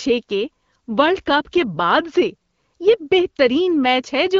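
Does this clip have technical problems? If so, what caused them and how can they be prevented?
No, the speech comes through the AMR wideband (HD Voice) codec at 12.65 kbit/s, a rate at which it stays clear, and no technical problem can be heard in the signal.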